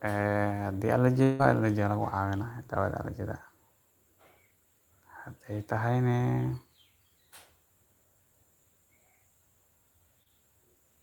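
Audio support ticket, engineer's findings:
1.23–1.41 s: long network dropout, likely. About 160 ms of speech lost and entirely concealed, no silence. Last sound stretched into a fading buzz or hiss. Spectrogram: smeared, decaying harmonics, no new onsets. Speech resumes without the missing part.

10.23–10.28 s: short concealed packet loss. About 20 ms missing, roughly 24 ms synthesised by the decoder, then cross-faded back. Audible as a brief wobble. Waveform: continued last sound blending back into the real signal. Spectrogram: briefly blurred frame.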